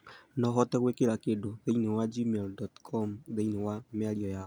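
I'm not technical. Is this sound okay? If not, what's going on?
Yes, nothing wrong can be heard in this speech recording.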